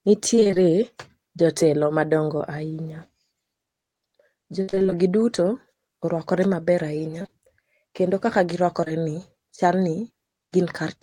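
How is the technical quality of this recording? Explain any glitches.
The speech is marred by recurring network dropouts, heard as four choppy, robotic passages and one brief smear.

Repeated packet loss (robotic sound) occurs at 0.35–0.58 s, 4.62–4.93 s, 7.19–7.34 s and 8.81–9.04 s. In each stretch the voice turns stuttering and choppy, with fragments chopped out. The audio arrived in bursts with holes between them. The receiver patched every hole by extending the preceding sound, and the next hole followed soon after. Roughly half of each span is synthetic fill. The worst run, at 4.62 s, includes a gap of about 58 ms.

Short concealed packet loss appears at 2.38–2.42 s as a quick wobble or smear in the voice. About 20 ms of audio never reached the decoder in time. The receiver bridged it by continuing the last sound and then blending back into the real signal, so the dropout is heard as a small blur rather than a clean gap.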